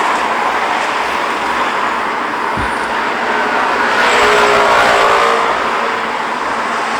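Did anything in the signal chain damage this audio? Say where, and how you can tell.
Yes. Hard clipping runs through the whole clip, from a stage driven about 10 dB past its limit, likely the converter or a gain stage ahead of it. Only a small share of samples hit the ceiling, so loud peaks crackle. The waveform shows flat-topped peaks, and the spectrogram shows harmonic smearing high up at each peak.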